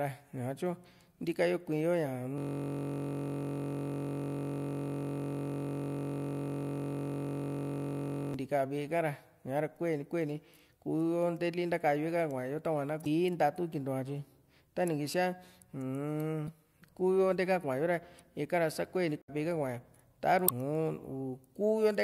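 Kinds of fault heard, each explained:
System hang loop: from 2.38 to 8.34 s, one 21.33 ms slice (fitting a 1024-sample buffer) repeats exactly, a steady 46.9 Hz buzz, not an irregular stutter.
Damaged data in a compressed stream: brief glitches at 13.03, 16.45, 19.22 and 20.45 s, each under 0.1 s, where the decoder misreads the damaged frames.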